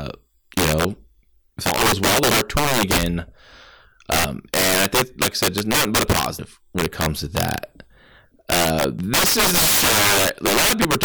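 Speech, and the loud syllables all through it crack hard. That's integer overflow: the level was pushed roughly 9 dB past full scale, and instead of being limited, the peaks wrap around to the opposite sign. Something like 7 percent of the samples end up flipped across the whole range, so what you hear isn't the fuzzy flattening of clipping. It's a violent, sharp crack on every loud peak. On top of that, there are four places where compressed frames were skipped and the audio jumps forward. At 4.25 s, just before "and I think like", roughly 200 ms goes missing. At 6.39 s, between "just nothing but a" and "when it comes to", about 100 ms drops out, and so does about 100 ms at 8.99 s and again at 10.47 s. Those gap sizes fit whole frames of around 93 ms each, two at the first spot and one at the others.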